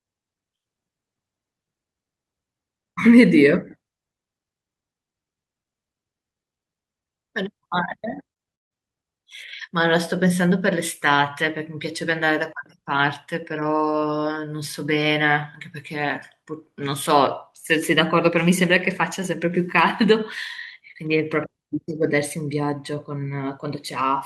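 A speech recording. Packets arrived too late for the decoder at 8.33–8.37 s and 8.37–8.41 s, so two back-to-back short concealed packet losses briefly smear and wobble the speech. From 8.55 to 8.72 s the sound thins into a fading buzz or hiss and then goes quiet, and speech resumes with that stretch missing, likely a long network dropout.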